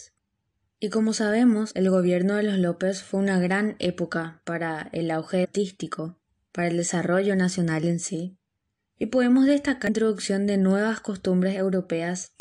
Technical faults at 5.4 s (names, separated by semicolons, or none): damaged data in a compressed stream